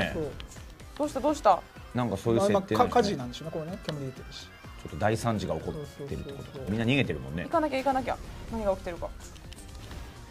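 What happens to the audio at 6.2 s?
Nothing goes wrong at 6.2 s; the audio there plays through cleanly, with no dropout, click, distortion or other fault.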